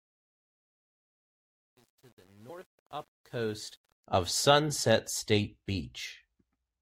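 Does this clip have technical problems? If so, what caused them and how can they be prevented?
Yes. The speech opens with truncation distortion on a fade: from 0 to 4.07 s the fade-in is gritty, worst from 0 to 3.52 s, because the quiet part is quantized into coarse steps without dither, which fits roughly 9-bit resolution. Keep gain stages at high bit depth and dither before any reduction.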